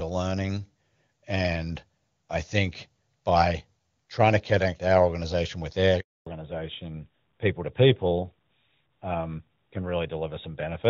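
A speech recording with a handover gap from 6.00 to 6.26 s. The voice fades out within a few tens of milliseconds and stays silent for 260 ms. The call was switching networks, and no speech frames arrived during that switch. Whatever was said in that gap is gone. From 6.26 s to the end there is a fallback to narrowband. Before it, the sound is clear HD Voice, which fits AMR-WB at its top rate. After the handover, nothing above 4 kHz remains. The voice becomes duller and rougher, which points to AMR-NB at 12.2 kbit/s.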